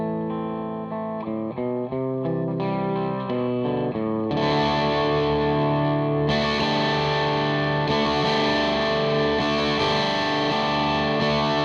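From start to finish the sound is dull and gurgly, with a grainy, swirling edge where the top end keeps dropping in and out. That points to MP2 compression, likely at a low rate around 80 kbps, starving the upper sub-bands of bits and coarsely quantising what's left.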